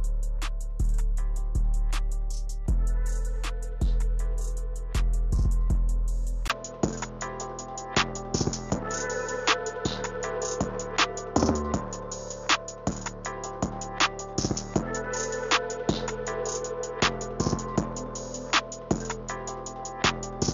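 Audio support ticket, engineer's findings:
Input switched to a poorer device, likely at 6.48 s: 20 ms dropout, then sound narrows to nothing above 7 kHz, a few dB quieter, with a new low background noise, persisting to end. Points to the input routing changing microphones mid-capture.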